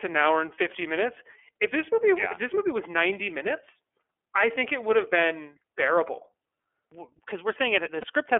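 Speech that sounds thin, slightly rough and synthetic throughout, confined to roughly 300 Hz to 3.4 kHz. This is the iLBC codec, and the damage fits its 13.33 kbps mode with 30 ms frames. From 8.01 to 8.05 s a brief buzzy, held vowel replaces the voice. These are lost iLBC frames, consistent with a single missing 30 ms frame concealed by repeating the last pitch cycle mixed with noise.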